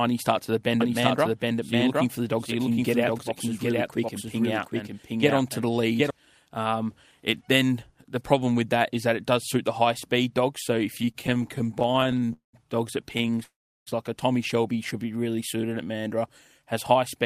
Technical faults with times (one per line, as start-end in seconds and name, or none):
0.80-6.10 doubled audio track
10.97-12.31 repeated stalls (stutter)
12.33-12.55 call audio freeze
13.17-13.41 repeated stalls (stutter)
13.43-13.89 call audio freeze
15.17-16.20 jitter buffer slow-down